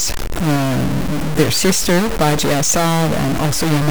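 A stuck bit runs throughout, likely one fairly high data bit held fixed, adding harsh, buzzy distortion to the speech and loud noise filling every pause.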